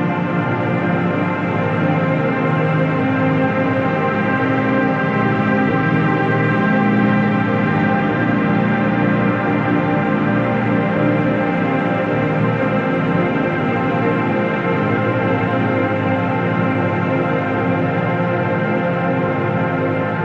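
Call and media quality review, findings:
Brief glitches with small forward jumps at 5.69, 12.61, 14.31–14.33, 15.47, 19.28 s: compressed frames skipped, a few 23.2 ms frames each, up to about a tenth of a second lost.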